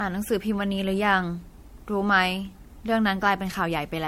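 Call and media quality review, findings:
Generation loss, whole clip: swirly, hollow speech, smeared attacks, nothing above 16.5 kHz. Likely around five MP3 re-encodes, fitting 64 kbit/s, each pass adding quantisation noise.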